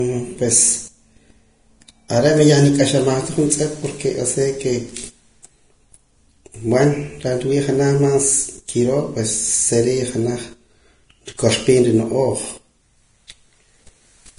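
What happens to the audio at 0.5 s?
At 0.5 s the speech sounds dull, with nothing above about 10.6 kHz. This isn't a momentary event: the same character runs through the whole clip. The likely cause is low-bitrate audio saved at a high bitrate. An early encode, which the sound suggests was a low-rate one around 31 kbit/s, discarded the top octave and detail. The later MP3 pass, pointing to roughly 256 kbit/s, preserved that damage faithfully but could not restore anything.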